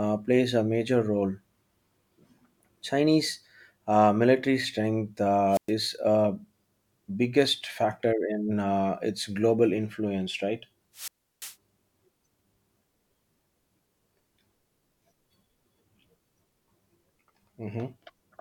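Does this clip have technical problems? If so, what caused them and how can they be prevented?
Yes. Two wireless microphone squelch dropouts occur, at 5.50–5.72 s (a hole of 114 ms) and 10.94–11.56 s (343 ms). Each time the FM radio signal fades, hiss briefly rises, and the receiver's squelch mutes the output until speech returns. Keeping the transmitter close with clear line of sight and using a diversity receiver prevents this.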